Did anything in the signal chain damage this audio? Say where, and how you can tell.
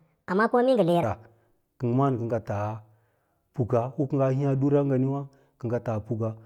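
Yes. The opening section, from 0.0 to 1.03 s, plays at the wrong speed, likely because that stretch was played back or edited against the wrong clock rate so its samples ran through too fast. It plays at 1.46 times the original speed, and because speed and pitch move together, the speech there sounds hurried and raised by about seven semitones. At 1.03 s the pace and pitch drop back to normal.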